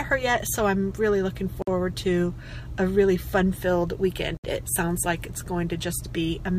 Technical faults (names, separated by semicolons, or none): gap at a join of encoded pieces